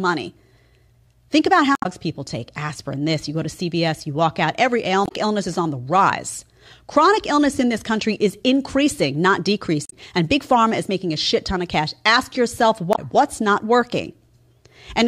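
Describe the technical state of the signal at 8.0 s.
At 8.0 s the speech signal is intact, with no audible fault at that moment.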